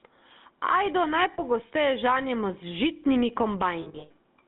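From the start, loud and soft parts sit closer in level and the sound is squashed, with a gain swing of around 15 dB. This is gain pumping, likely from a fast limiter working against gain set far too high. On a waveform, the quiet gaps look raised and the peaks look flattened.

Throughout, the speech has the buzzy, gravelly roughness of the GSM full-rate codec, which fits a 13 kbps coder. It rebuilds the voice from a vocal-tract model driven by sparse, regular pulses. A spectrogram shows energy confined to about 200 Hz to 3.7 kHz, with nothing above.

From 1.34 to 1.40 s, lost GSM frames cause a brief metallic ring lasting about 40 ms. The decoder repeats the settings of the last good frame. On a spectrogram this appears as a short smear of frozen, repeated harmonics.

From 3.82 to 4.11 s, a longer cluster of lost frames adds up to about 220 ms of damage spread over 280 ms, with the longest gap around a tenth of a second. 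The sound rings roughly and metallically, which shows as repeated blocks in the spectrogram.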